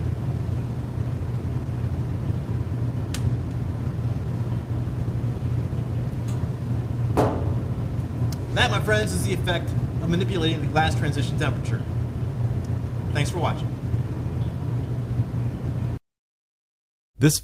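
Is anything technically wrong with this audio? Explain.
No, nothing stood out as a technical problem on listening.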